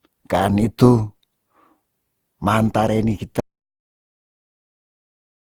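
From the first moment the speech sounds swirly, smeared and hollow, with consonant attacks blurred, yet the top end still reaches about 20.4 kHz, so bandwidth is not what is missing. This is generation loss, likely from the audio being decoded and re-encoded around seven times through a codec that sounds like Opus at about 48 kbit/s. Each pass requantised on a shifted frame grid, stacking fresh noise and spectral holes.

At 3.40 s the audio drops out to silence, cutting off mid-flow, and never returns before the clip ends. The gap is silent with no room tone beneath it, and whatever was said after that point is lost. That points to the input being lost, likely through a disconnected device, a failed link or a mute, while the recorder kept writing empty samples.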